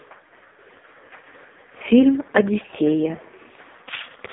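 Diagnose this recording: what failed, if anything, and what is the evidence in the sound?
AMR narrowband mobile codec throughout: heavy coding leaves speech buzzy and synthetic, with nothing above 3.8 kHz. This fits a pulse-driven vocal-tract model at roughly 5 kbps.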